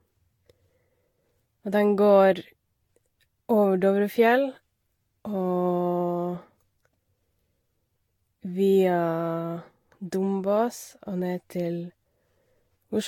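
Throughout, swirly, hollow smearing and blurred attacks exceed what one encode near 65 kbit/s would leave, fitting likely generation loss over about five Vorbis passes.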